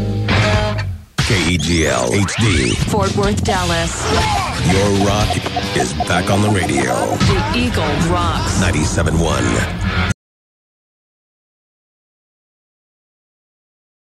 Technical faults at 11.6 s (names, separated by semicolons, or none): audio dropout to silence